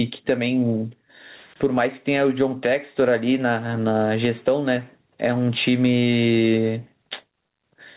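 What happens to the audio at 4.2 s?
At 4.2 s, as throughout, gain pumping: gain swings about 15 dB, pulling loud and soft parts closer in level, likely excess gain into a fast limiter, flattening waveform peaks.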